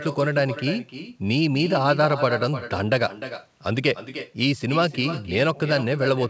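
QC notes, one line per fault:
Throughout, echo with no canceller: the speech is shadowed roughly a third of a second later by a copy about 11 dB down, and thinner. The far-end loudspeaker leaks into its microphone and nothing removes it, so the voice returns after the network round trip.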